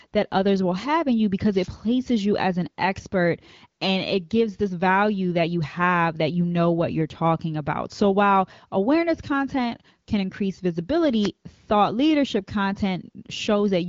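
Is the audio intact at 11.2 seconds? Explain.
No. From 11.20 to 11.30 s a brief swish of static is heard: a wireless microphone noise hit, where the FM radio signal faded and receiver noise surged.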